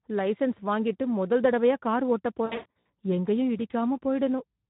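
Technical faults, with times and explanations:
throughout: Speex codec. The speech sounds hoarse and grainy, with a noisy roughness on voiced sounds. This CELP coder models each short stretch of voice with a vocal-tract filter plus a coded excitation signal. At the low rate this damage points to, around 11 kbps, the excitation gets too few bits to carry the fine detail of the voice, so the coder fills it with a coarse, noise-laden approximation.
2.45–2.85 s: VoIP packet loss concealed by the speech codec. Just after "முதல் தடவையா கார் ஓட்டப்", the voice turns buzzy and smeared, sagging into a fading, coloured tone in several places, and it stays weak and distorted in the gaps between. About 280 ms of audio is missing, scattered across this 400 ms stretch, and the longest single gap is 120 ms. For each missing piece, the decoder stretched out its last pitch and filter settings and lowered the gain step by step. 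Because every frame is built on the one before, the sound needs time to recover once audio resumes.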